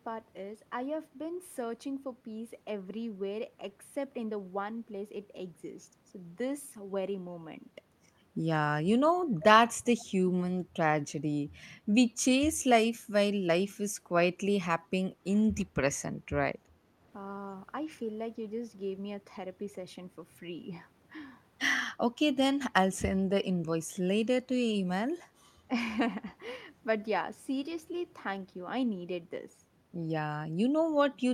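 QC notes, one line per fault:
9.99–10.05 s, echo leak: the far end is likely playing the call over a loudspeaker, and its echo canceller let a short fragment of the returned signal slip through and come back down the line. It is heard as a brief, faint ghost of the speech trailing the original by about 359 ms, roughly 25 dB below it, so it registers as a scrap rather than a clear repeat.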